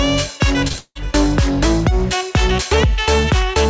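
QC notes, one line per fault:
0.68–0.76 s, short concealed packet loss: two back-to-back 20 ms gaps, each patched by extending the preceding sound, heard as a brief smear before real audio resumes.
0.78–0.97 s, long network dropout: the last sound is stretched into a fading buzz or hiss, then about 40 ms of near-silence, likely from stalled delivery, before audio resumes without the lost part.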